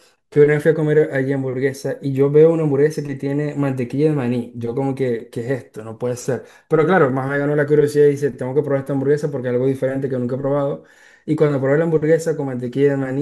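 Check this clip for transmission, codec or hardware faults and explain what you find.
Nothing in the speech points to a transmission, codec or hardware problem; the signal holds steady throughout with nothing audibly going wrong.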